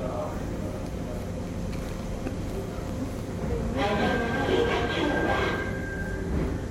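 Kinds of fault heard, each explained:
Loud pop: a single sharp pop at 2.89–2.93 s, a few decibels above the sound, which continues underneath; likely a voltage step from a plug, switch or static.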